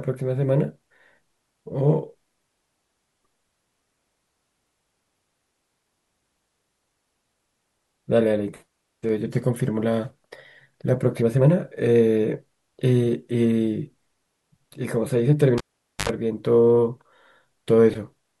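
At 15.58 s the speech is cut by a cable pulled and plugged in, lasting until 16.09 s. A pop marks the live connector leaving its socket, then the signal drops to near silence for about 465 ms. On reinsertion the tip makes contact before the ground, so an unshielded 50 Hz mains buzz comes through for about 77 ms. A second pop follows as the plug seats fully and the speech returns.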